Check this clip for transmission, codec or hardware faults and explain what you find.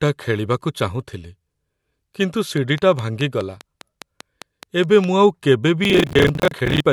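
Two faults are audible in this speech recording: a run of clicks and a short stretch of overload crackle near the end.

Train of clicks, 2.58 to 5.05 s: sharp pulses of much the same shape arrive at a steady 4.9 per second, around fifteen in all, peaking about 10 dB above the speech. They tick through the pauses too, pointing to a likely source in electrical interference or a struggling interface.

Processor overload crackle, 5.84 to 6.80 s: the processor repeatedly missed its deadlines for short audio buffers, which fits buffers of around 10 ms, dozens missed. Each miss replays stale audio with hard edges, giving a gritty tearing over the speech until it stops.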